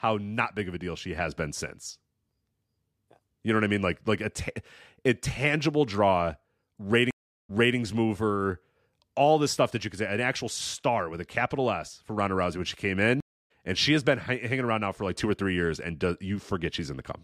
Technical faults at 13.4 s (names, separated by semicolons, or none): stream reconnect